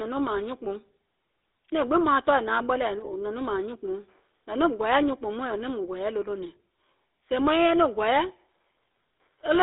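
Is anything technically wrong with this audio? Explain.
Yes. Throughout, the speech carries GSM full-rate codec damage. The pulse-driven coding gives a buzzy, gravelly roughness, fitting 13 kbps. Nothing sounds above 3.8 kHz; the band is 300 Hz to 3.7 kHz.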